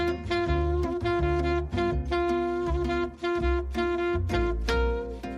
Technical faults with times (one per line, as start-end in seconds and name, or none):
none